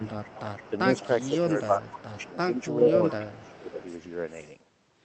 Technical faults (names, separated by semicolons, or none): echo leak; speech suppressed in double talk